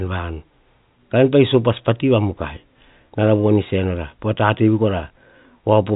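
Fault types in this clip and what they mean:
No technical faults are present: the speech sits in an ordinary telephone band with nothing above about 3.8 kHz, which fits standard 64 kbps G.711 A-law telephone coding working as intended.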